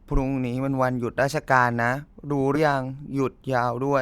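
At 2.55 to 2.58 s, compressed frames are skipped: roughly a tenth of a second of speech vanishes, consistent with about five 20 ms frames, so the speech jumps ahead.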